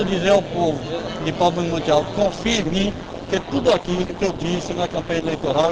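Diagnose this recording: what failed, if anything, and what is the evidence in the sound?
Overlap-add ripple runs through the whole clip. The fault sits in a frame-based processing stage, where audio is split into windowed frames and rebuilt. The window overlap does not sum to a constant gain. So the level swells and dips once per frame, by about 11 dB. That modulation runs at around 150 Hz. It is heard as a metallic buzz, with extra tones around each note, laid over all of the sound.

An adaptive stream at a lower bitrate takes over at 2.20 s and lasts to the end. This is a network and codec fault. The connection slowed, so the player switched to a leaner version of the stream. The change is abrupt, with no gap. Treble vanishes above 12.1 kHz, and codec artefacts thicken. The drop in quality points to a step from a mid-rate Opus stream down to a very low one.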